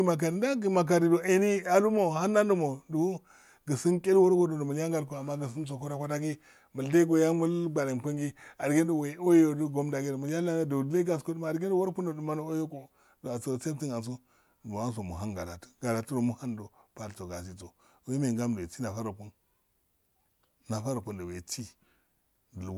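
No technical faults can be heard anywhere in the speech recording. There is nothing in the signal to point to or to place in time.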